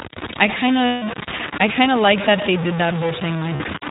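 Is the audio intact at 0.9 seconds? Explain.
No. From 0.86 to 1.04 s, just after "I kind" and before "I kind of like", lost iLBC frames leave a 0.16 s gap, which fits eight 20 ms frames going missing. The decoder repeats the last pitch cycle blended with noise, so the gap sounds like a held, buzzy, breathy vowel. Unlike a plain dropout or a smeared concealment, speech returns almost at once, because each iLBC frame decodes on its own.

The iLBC codec is also plainly audible at this point. Nothing above 4 kHz passes, and the speech sounds rough and somewhat synthetic. Its character fits the 15.2 kbps, 20 ms frame mode. Unlike wideband codecs, it leaves a hard narrowband ceiling.

A coarse grit also rides on the sound, with error almost as loud as the signal, roughly 10 dB below it. It follows the level and texture of the sound rather than forming a steady hiss, likely from truncation to about 5 bits without dither.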